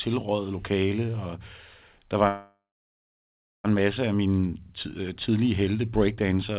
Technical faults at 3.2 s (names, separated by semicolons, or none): call audio freeze